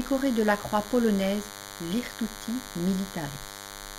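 Speech runs over a DECT cordless phone buzz for the whole clip: a thin, steady 100 Hz rasp sitting roughly 15 dB under the voice, from a nearby handset's 10 ms radio bursts being rectified. A spectrogram shows evenly stacked horizontal harmonic lines; the waveform shows regular spiky pulses.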